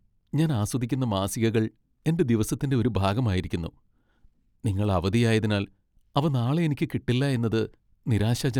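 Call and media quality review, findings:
Nothing to flag on this one; no faults turned up anywhere in the speech.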